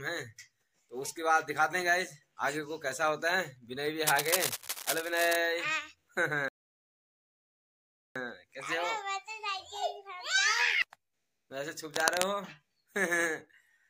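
From 4.07 to 5.36 s, cable scratch noise, likely from a worn connector being moved, adds dense, uneven rustling bursts only a little below the sound. On a spectrogram these show as broadband speckled streaks.

From 6.48 to 8.16 s, a playback stall, likely the player running out of data, cuts the audio mid-flow for 1.67 s, leaving a flat gap in the waveform.

The same scratch noise briefly returns from 11.85 to 12.31 s.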